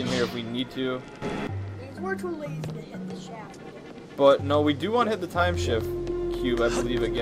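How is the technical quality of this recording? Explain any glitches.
One glitch stands out. From 1.22 to 1.47 s there is a sudden gain jump of about 12 dB, likely from gain applied without a ramp. Sound and background noise step up together instantly, unlike a smooth fade or compressor swell.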